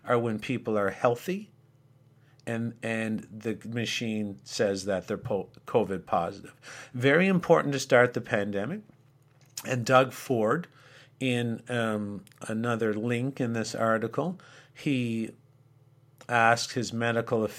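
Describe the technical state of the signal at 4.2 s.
At 4.2 s the speech signal is intact, with no audible fault at that moment.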